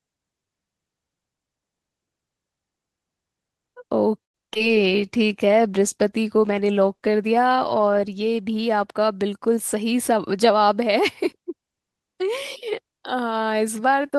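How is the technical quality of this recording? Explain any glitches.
The recording shows a cluster of network-related faults between about 4.2 and 10.8 s, running through a call path that sounds consistent with Opus at around 32 kbps.

Call audio freeze, 4.23–4.36 s: the sound stalls into roughly 100 ms of silence, likely a jitter buffer running dry while packets were held up. It then resumes with nothing lost.

Short concealed packet loss, 4.54–4.57 s and 4.59–4.62 s: brief smears where missing audio was patched by extending the preceding sound, so a few short fragments drop out.

Call bitrate drop, 4.69–8.69 s: the encoder coarsens for about 3.9 s, giving rough sound. This fits a halving from about 32 to 16 kbps.

Jitter buffer slow-down, 5.00–5.34 s: repeated pitch periods add 54 ms. The audio plays at about 87% speed with unchanged pitch and sounds drawn out.

Jitter buffer speed-up, 9.56–10.84 s: short pitch-period cuts remove roughly a tenth of a second. 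The audio runs at about 108% speed and sounds hurried at the same pitch.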